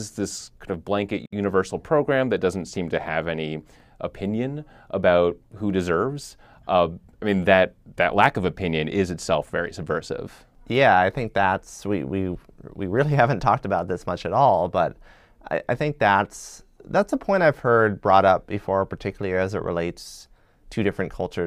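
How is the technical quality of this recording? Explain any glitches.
There is one glitch, a gap at a join of encoded pieces, from 1.26 to 1.33 s, between "this kind of blanket" and "program that doesn't seem". Two separately encoded segments were joined without trimming the encoder's start delay and end padding, leaving a gap of about 67 ms with smeared edges. Unlike a dropout, nothing is lost: the speech resumes exactly where it stopped.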